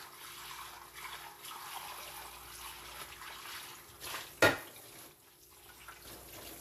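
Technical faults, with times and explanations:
Throughout, Vorbis compression: nothing above 14.2 kHz, with grainy, hissy treble and blurred attacks, likely coarse quantisation at a bitrate near 37 kbps.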